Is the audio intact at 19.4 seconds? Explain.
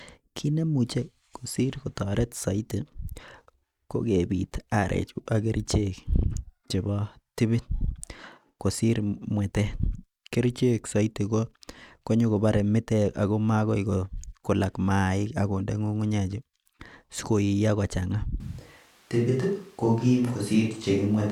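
No. From 18.40 s to the end, there is a switch to a distant microphone. The speech turns roomy and hollow, with thinner bass, at similar level. Room noise sits about 35 dB below. The close microphone likely dropped out.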